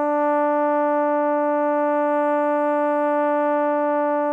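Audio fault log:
Nothing in this music stood out as a fault on listening.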